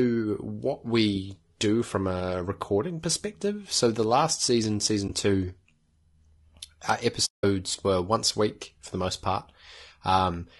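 From the start, the speech has a rough, grainy edge, with a hiss sitting between the harmonics and a top end that sounds thinned out and a bit synthetic. That's most likely low-delay AAC compression, the AAC-ELD kind used on video calls. Its short frames can't separate pitch harmonics cleanly, and at a rate that sounds like around 32 kbps there aren't enough bits to cover for it, so the damage is plainly audible all the way through.

Right after "the last season", from 5.07 to 5.10 s, there's a brief soft dropout of about 20 ms. That's AAC frame loss with muting: a single frame went missing and the decoder zeroed its spectrum, so the overlapping windows fade the sound down and back up instead of snapping. The second one, from 7.25 to 7.44 s just before "were once a week", is the same thing but much longer, about 180 ms of silence. It sounds like a gentle hole.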